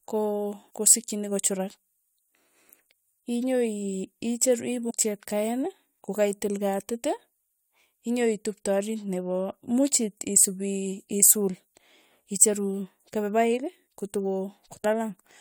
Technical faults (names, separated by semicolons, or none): damaged data in a compressed stream